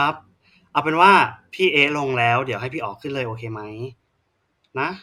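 No technical faults can be heard anywhere in the speech. Nothing in the recording calls for a time stamp or a fault name.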